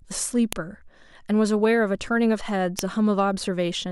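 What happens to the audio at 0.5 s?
Right at 0.53 s there's a file header played as audio: a sharp, loud snap lasting about a millisecond. It sounds like a WAV piece was spliced in with its header still attached, so those few dozen header bytes get read as samples and burst out over the speech.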